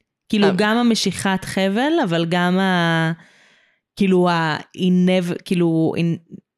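No technical faults occur at any point in the recording, so there is nothing to describe in time order.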